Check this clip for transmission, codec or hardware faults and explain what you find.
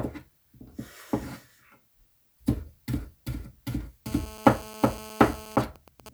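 Two faults appear near the end, both from a 2G handset transmitting close to the recording chain.

GSM phone buzz runs from 4.06 to 5.56 s. A phone in an active call sends radio bursts at 216.7 Hz, and the audio circuitry rectifies them into a hard, raspy buzz about 12 dB below the wanted sound, unrelated to it. On a spectrogram it is a comb of evenly spaced horizontal lines at 217 Hz and its many harmonics. The waveform shows a regular pulse train riding on the signal.

GSM signalling bursts follow from 5.58 to 6.09 s. The same phone, still in the call but with its user silent, transmits only short groups of bursts, which are again rectified, somewhat quieter than the steady buzz. The result is even ticks with a longer 217 Hz buzz twice a second. A spectrogram shows short vertical clusters of the harmonic comb with gaps between them. On the waveform these are intermittent packets of pulses.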